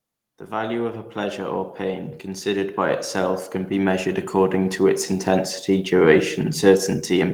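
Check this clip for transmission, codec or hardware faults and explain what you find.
One fault is present: automatic gain rising, from 0.49 s to 5.97 s. The gain control judged the input too quiet and lifted its gain by about 14 dB, slowly, so the speech and the background noise swell together over those five and a half seconds.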